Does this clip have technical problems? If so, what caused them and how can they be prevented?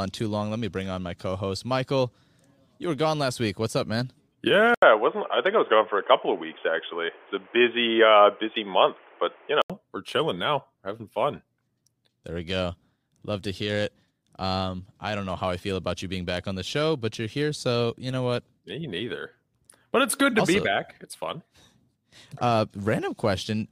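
Yes. From 4.74 to 9.70 s the speech turns dull and boxy, with nothing above 3.5 kHz and an 80 ms gap at the switch. The likely cause is an input switched to a poorer device, with its own noise and a level change of about 5 dB. The switch comes just before "we're chilling now having". Lock the recording input to one microphone and turn off automatic device switching.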